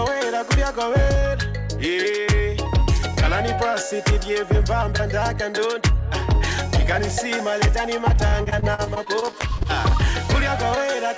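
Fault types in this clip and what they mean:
Repeated packet loss (robotic sound): from 8.28 to 9.67 s the sound turns choppy as short holes, none over 40 ms, are patched by repeating the last sound, covering about a quarter of the span. Unlike a single dropout, the patches recur rapidly.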